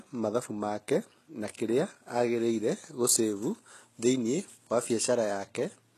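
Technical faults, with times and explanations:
Throughout, HE-AAC compression: plainly audible codec damage, nothing above 12.4 kHz, and a bright but synthetic top whose harmonics don't match the band below. This is likely spectral band replication copying lower bands upward, at a bitrate that fits roughly 16 kbps.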